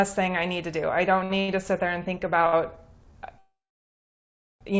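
At 1.24, 1.40, 2.18 and 2.47 s there are four short stalls from late packets. Each time a packet arrived after its playout moment and the jitter buffer ran dry, so the receiver held the last sound until the packet came in, then resumed where it left off. The holds last 58, 82, 27 and 60 ms. Nothing is lost, but the sound hangs briefly with a faint buzzy smear, and the timing shifts later.

From 3.38 to 4.63 s there is a call audio freeze, likely from packets held up in transit long enough to empty the jitter buffer. The last sound is drawn out for a moment, then about 1.04 s of silence follows. The audio then picks up where it stopped, so roughly 1.2 s of gap has been inserted without any content dropped. Throughout, the band ends at 8 kHz, which fits a G.722 call codec.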